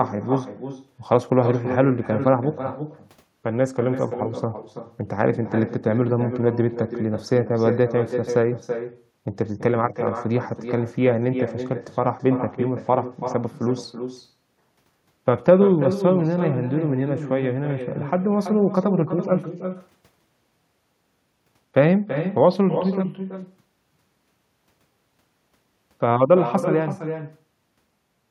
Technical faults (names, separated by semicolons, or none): echo with no canceller